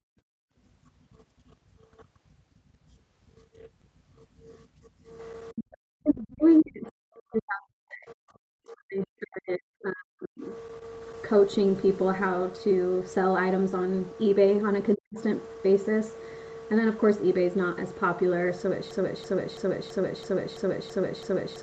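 From 0.00 to 0.54 s the room sound is background gated by the echo canceller: with the loudspeaker playing, the canceller pulled the microphone down hard, by as much as about 36 dB, for roughly half a second, and then released it. Here the ambient bed drops away. That sets it apart from the double-talk suppression later in the clip, where the talker's own voice is cut.

Speech suppressed in double talk appears three times: 5.52 to 6.44 s, 6.61 to 10.51 s, and a brief 14.95 to 15.17 s. The likely cause is both sides talking at once, so the canceller could not separate the local talker from the loudspeaker echo and attenuated everything, at worst by roughly 40 dB. The voice dips, loses its top end or breaks into pieces. The long middle stretch runs about four seconds, much longer than the short gating dip at the start.

Between 6.59 and 6.65 s, the other side's voice leaking through shows up as a scrap roughly 20 dB below the talker. 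It is likely residual loudspeaker sound the canceller failed to remove from the microphone. This is a second, quieter voice that is added to the audio, not a drop in level. It falls right at the gap between the first two suppression spans.

From 18.91 s to the end, a broken-record loop takes over. A 0.33 s fragment repeats exactly, back to back, eight times, and the sound that should have followed is lost. The likely cause is a stalled player, encoder or stream resending the last fragment it held. The repeats are identical and evenly spaced, which separates this from random packet-loss glitches or suppression dips. The repeating fragment keeps the band limit near 8 kHz that runs through the whole clip.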